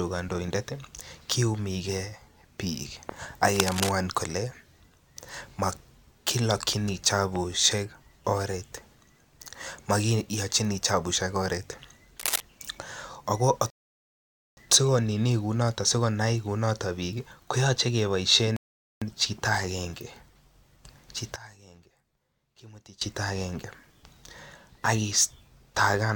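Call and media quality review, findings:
Cable scratch noise, 3.53 to 3.91 s: dense, uneven rustling bursts over the speech, slightly below speech level. Likely a worn cable, connector or control being moved, its contact resistance fluctuating rapidly and modulating the signal path.

Cable scratch noise, 12.19 to 12.40 s: same scratching texture, shorter, roughly as loud as the speech. Likely the same intermittent contact, disturbed again, injecting noise bursts directly into the signal.

Rebuffering stall, 13.70 to 14.57 s: hard cut to silence, then speech resumes exactly where it stopped, nothing skipped. Player buffer underrun. Playback halted until more data arrived, adding 0.87 s to the timeline.

Rebuffering stall, 18.56 to 19.02 s: second silent gap, continuity intact on resume. Same buffer starvation in the playback/streaming path, adding 0.45 s. Points to delivery rate not keeping up with playback.

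One channel inverted, 21.36 to 23.01 s: centred speech drops by about 18 dB and turns faint on mono playback. Likely a polarity flip on one stereo channel, so the common centre content cancels when summed and only the inter-channel difference remains.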